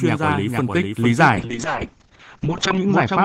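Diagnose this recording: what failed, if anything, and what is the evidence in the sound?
A doubled audio track runs throughout. A full-band copy about 5 dB quieter trails by roughly half a second, with no reverb. A second capture path is the likely cause.

A call bitrate drop hits the codec stage from 1.37 s onward. The encoder falls from 32 to 6 kbps, bandwidth narrows from 20 kHz to 8 kHz, and the speech turns muffled and rough.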